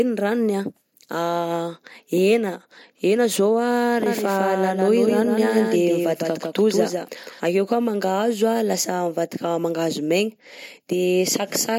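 A doubled audio track appears from 4.06 to 7.40 s, likely because a second, slower capture path or a misaligned edit mixed a copy of the speech back in behind itself. The copy trails by roughly 150 ms at about 5 dB below the original, full-band and dry, with no decay or room colour, so each syllable is shadowed by a distinct echo. It switches on and off abruptly, starting just before "akeo koà".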